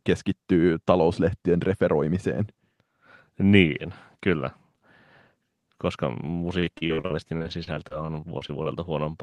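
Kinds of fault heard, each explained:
Repeated packet loss (robotic sound): From 6.59 to 8.67 s the speech turns choppy, with eighteen short holes, none longer than 40 ms, patched by stretching the preceding sound. Lost or late packets keep recurring, leaving about a fifth of that stretch concealed.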